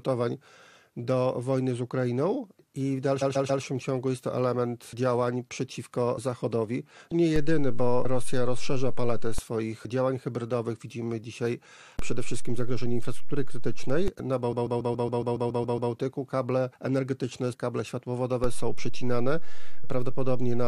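At 3.21 to 3.62 s, repeated frames produce a stutter. A block of about 139 ms, which fits a run of six compressed frames, plays three extra times, adding about 0.42 s.

A DC step at 7.36 s shifts the waveform's zero line, heard as a low thump, and the offset ends at 9.38 s. The sound continues unchanged throughout. The same happens at 11.99 s, returning at 14.08 s.

From 14.51 to 15.91 s, the same 139 ms block repeats ten extra times, a longer stutter that adds about 1.39 s.

A final DC step at 18.44 s thumps and holds to the end of the audio.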